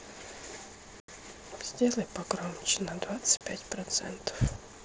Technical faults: unconcealed Bluetooth headset packet loss

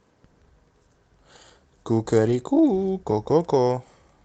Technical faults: lost packet rebuilt from error correction

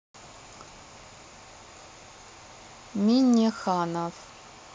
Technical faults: dropped buffer (overrun)

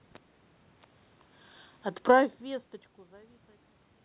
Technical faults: automatic gain falling

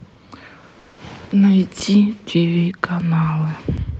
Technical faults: call audio freeze; underrun with held sample

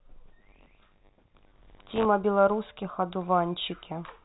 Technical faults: buffer tearing

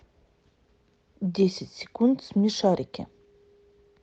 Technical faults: none

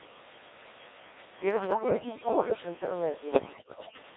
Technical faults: Codec 2 vocoder; bit errors on digital voice radio

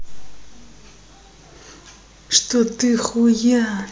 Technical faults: none

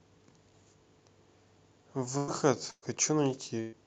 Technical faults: burst of packet loss; lost packet rebuilt from error correction

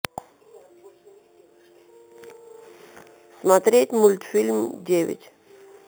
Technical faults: imaging from sample-and-hold upsampling

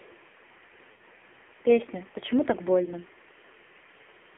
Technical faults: AMR narrowband mobile codec; lost AMR speech frames

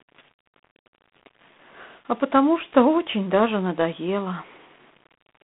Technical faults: low bit depth without dither; G.726 ADPCM

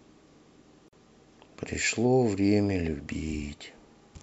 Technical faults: gap at a join of encoded pieces

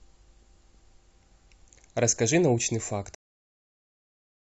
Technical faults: cut-off end

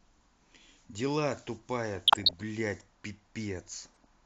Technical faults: DAB burbling

